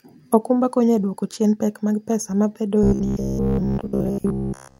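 A speech recording that turns into robotic sound from repeated short buffers from 2.83 s to the end at 4.80 s. Across that stretch the voice becomes a rigid, metallic buzz pinned at about 66.7 Hz that only loosely tracks the syllables. The likely cause is audio arriving too slowly, with playback looping a 15 ms fragment to fill the gaps. The loop length sets the buzz pitch, and roughly 70 percent of the audio there is repeats rather than new material.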